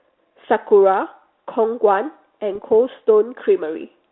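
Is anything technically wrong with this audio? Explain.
Yes. There are bit errors on an ADPCM link between 2.55 and 2.65 s. The narrow telephone band, cut off near 3.6 kHz, fits a G.726 link at 32 kbit/s. A few bits arrived flipped, at a rate of about 0.07 percent. Each bad bit also knocks the decoder's step size and prediction off track, so the error rings on for some milliseconds. The result is a short pop and rough burst with brief jumps in level.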